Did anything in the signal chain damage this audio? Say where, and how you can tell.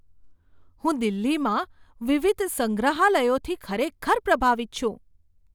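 No, nothing along the way seems to have harmed this bit of speech, so there's no stage in the chain to point a finger at.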